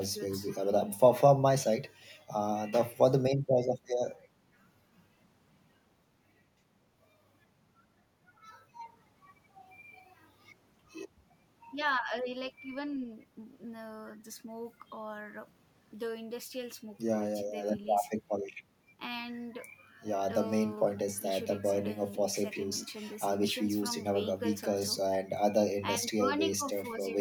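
No technical faults occur anywhere in the speech, so there is nothing to describe in time order.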